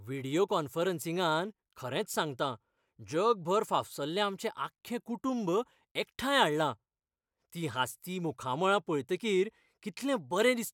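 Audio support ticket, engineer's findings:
No technical faults found on listening: the speech signal holds steady level and continuity throughout, with nothing attributable to capture, transport or playback components.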